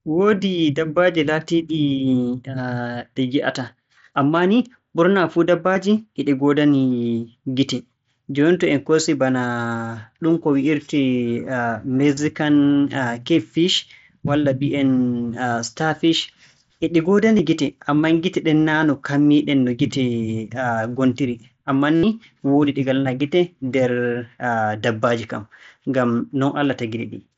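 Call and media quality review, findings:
Concealed Bluetooth headset packet loss at 5.73–5.76 s, 12.15–12.17 s, 17.37 s and 21.96–22.03 s: receiver repeats recent waveform over lost mSBC frames; the 82 ms run turns buzzy, with a warble on recovery.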